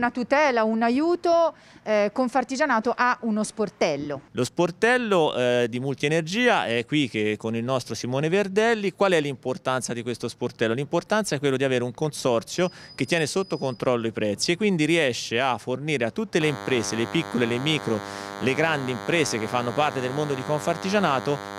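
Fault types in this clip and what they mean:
DECT cordless phone buzz: a nearby DECT handset or base sends radio bursts 100 times a second, rectified by the audio circuit into a thin, harmonic-rich 100 Hz buzz, fairly loud, from 16.4 s to the end.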